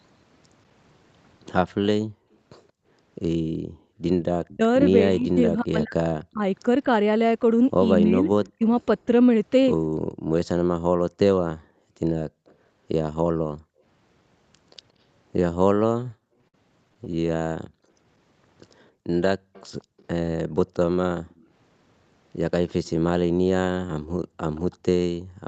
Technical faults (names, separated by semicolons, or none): background gated by the echo canceller; echo leak; speech suppressed in double talk; repeated stalls (stutter)